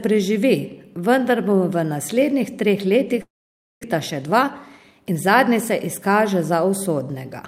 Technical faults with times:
3.21-3.85 long network dropout
3.93-5.99 jitter buffer speed-up

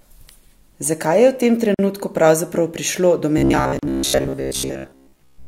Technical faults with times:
1.74-1.79 gap at a join of encoded pieces
3.38-5.47 robotic sound from repeated short buffers
3.79-3.83 gap at a join of encoded pieces

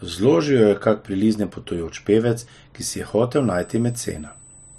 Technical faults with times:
3.35-4.79 USB whine

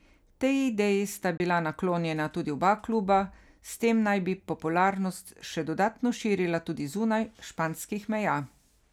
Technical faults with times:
1.37-1.40 Bluetooth dropout

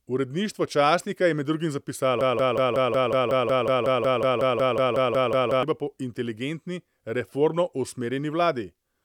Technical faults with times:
2.21-5.63 broken-record loop

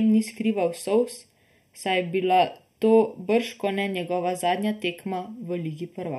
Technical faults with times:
0.00-6.18 channel delay (comb filtering)

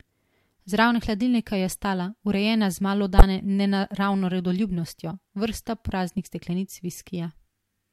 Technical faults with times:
3.18-3.23 corrupt frame decoded

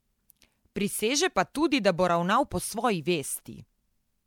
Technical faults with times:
0.00-4.26 generation loss

